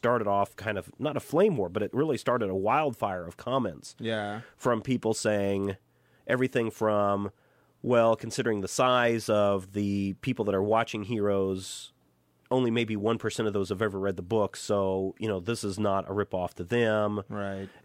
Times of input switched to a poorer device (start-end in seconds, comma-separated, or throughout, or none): none